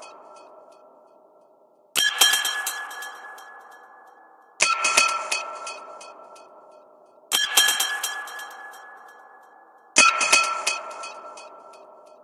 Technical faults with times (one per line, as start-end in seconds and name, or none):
none